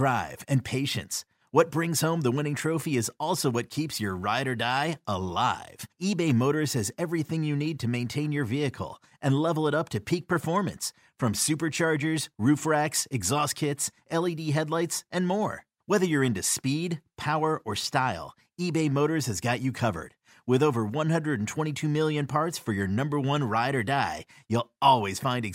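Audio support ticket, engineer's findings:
Listened through the speech recording and found nothing to flag, so no faults to report on this ticket.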